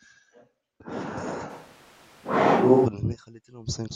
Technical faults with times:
1.51-2.84 switch to a distant microphone

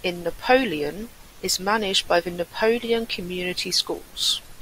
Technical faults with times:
0.97-1.58 drift correction step

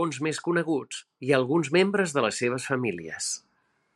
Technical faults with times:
none

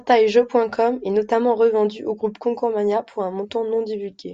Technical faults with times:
none

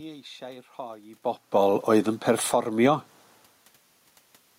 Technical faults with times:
2.24-2.77 automatic gain falling
2.69-3.25 automatic gain rising

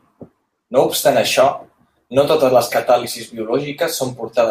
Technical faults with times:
none

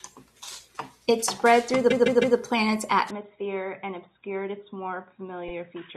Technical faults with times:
1.90-2.37 repeated frames
3.11-5.97 input switched to a poorer device
5.47-5.53 repeated frames

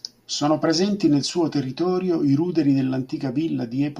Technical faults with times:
none

